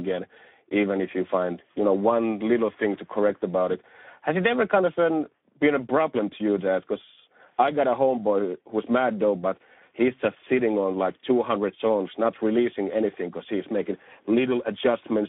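Throughout, Speex codec damage makes the speech hoarse and noisy, fitting a rate near 11 kbps; a spectrogram shows smeared harmonics confined between 200 Hz and 3.6 kHz.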